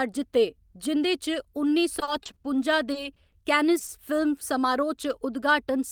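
From 1.99 to 2.46 s the speech turns choppy and robotic, with pieces audibly dropping out. This is repeated packet loss: five separate holes open within half a second, the longest about 40 ms. Each is patched by extending the last sound, about 130 ms in total, or roughly 28% of the stretch, while about 80 ms of real speech is simply gone.

At 2.92 to 2.96 s a sound is briefly held too long, with a faint buzz or dip before the speech picks up again where it left off. This is a short stall from a late packet. Arrival delay jumped by about 20 ms, the jitter buffer ran dry, and the receiver stretched the last sound for 20 ms until the data caught up. Nothing is actually lost here, only delayed.

Four quick smears follow, at 3.14 to 3.18 s, 3.30 to 3.34 s, 3.79 to 3.83 s and 3.87 to 3.91 s. Each is a brief wobble where a short sound can blur or vanish. These are short concealed packet losses. 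In each, 20 ms of speech never reached the decoder in time. The gap was filled by continuing the preceding pitch or shaped noise, then blended back into the real signal. The last two sit only 40 ms apart.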